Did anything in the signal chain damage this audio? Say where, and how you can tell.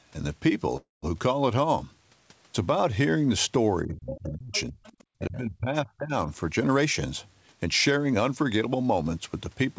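Yes. At the network and jitter-buffer stage there is a call audio freeze from 0.77 to 1.05 s. The likely cause is delayed packets leaving the buffer empty. The last sound is stretched into a fading buzz, then about 170 ms of silence, roughly 255 ms of filler in all. The speech then resumes intact, just later.

In call processing, speech is suppressed in double talk from 3.84 to 4.87 s and again from 5.19 to 6.29 s. The echo canceller likely mistook the talker for loudspeaker echo and turned the speech down, by up to about 35 dB in the first stretch and about 25 dB in the second.

The same echo canceller lets the other side's voice leak through at 4.11 to 4.37 s and 4.53 to 4.62 s, about 15 dB under the talker, and at 4.85 to 5.05 s, about 30 dB under. This is likely residual loudspeaker pickup that was never cancelled, heard as scraps of a second voice.

The jitter buffer performed a speed-up from 6.48 to 6.85 s, playing at 127% speed, and from 7.64 to 9.03 s at 109%. 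It drained surplus queued audio by cutting pitch-period slices, about 100 ms and 150 ms in total. The speech sounds rushed while its pitch stays unchanged.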